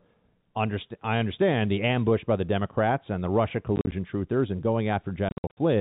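From 3.76 to 3.92 s, before "truthers and", and from 5.29 to 5.57 s, packet loss filled with silence punches hard-edged holes in the speech. About 80 ms and 220 ms drop out, in runs up to 40 and 60 ms, which fits 10 ms packets.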